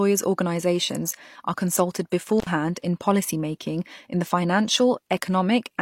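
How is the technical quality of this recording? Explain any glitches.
One glitch stands out: a brief intermittent contact fault between 2.40 and 2.47 s, right after "organisations are consulted" and before "in policymaking in the". For about 63 ms the connection opens, as a loose plug or cable would, so the speech drops out or breaks up, with crackle at each edge and hiss while the line is open. A waveform would show the amplitude collapsing, bracketed by sharp spikes. A spectrogram would show a short gap in the speech bands, with thin broadband vertical lines at its edges.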